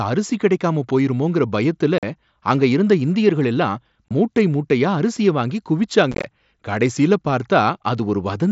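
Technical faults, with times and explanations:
1.98 to 2.03 s, unconcealed Bluetooth headset packet loss: a 45 ms hole with abrupt edges right after "அரிசி கிடைக்காம போயிருமோங்கற பயத்துல". Several consecutive voice packets between headset and phone never arrived, and nothing filled the gap, so the speech simply stops and restarts.
4.09 to 4.11 s, unconcealed Bluetooth headset packet loss: a brief 22.5 ms dropout, heard as a tiny abrupt-edged gap after "அங்க இருந்த இந்தியர்கள் எல்லாம்". A short run of lost packets left silence in place of the audio, with no smoothing over the cut.
6.12 to 6.24 s, unconcealed Bluetooth headset packet loss: a rough, chopped crackle just after "மூட்டை மூட்டையா அரிசிய வாங்கி". About 75 ms of audio went missing in short bursts scattered across 120 ms, the longest run 15 ms, each hole abrupt and unpatched. The wideband mSBC link carrying the speech gives only light graininess.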